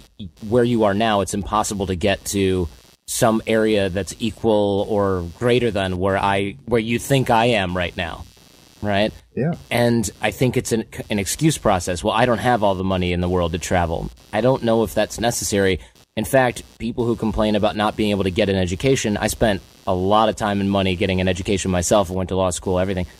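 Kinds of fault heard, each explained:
Computer activity noise: a buzzy, chirping layer sits under the speech for the whole clip, pulsing at something like 150 times a second and running roughly 30 dB below the talking. It comes from the computer itself. As the processor, graphics card or mouse shift their load, the current shifts the shared ground the audio circuit sits on. So the buzz follows whatever the machine is doing, not the rhythm or loudness of the speech.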